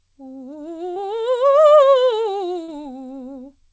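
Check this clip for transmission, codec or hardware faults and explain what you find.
Two dropouts appear in this music, both short concealed packet loss. They occur at 0.94–0.98 s and 2.64–2.70 s. About 20 ms, then 40 ms, failed to arrive. The receiver extended the preceding sound to bridge each gap. Each is heard as a brief smear or wobble. The music passes through a call codec, with nothing above 8 kHz.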